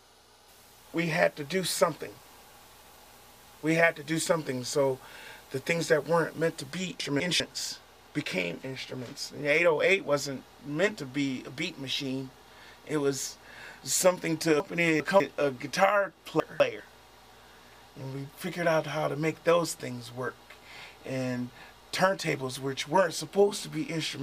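Chunks out of order occur at 7.0 to 7.4 s, 14.6 to 15.2 s and 16.4 to 16.8 s. In each, a 200 ms block of audio plays late, one block late at 7.0 and 16.4 s and two blocks late at 14.6 s. Nothing is missing, but the sound briefly runs in the wrong sequence, producing a jumbled stutter. Each rearrangement creates three abrupt joins.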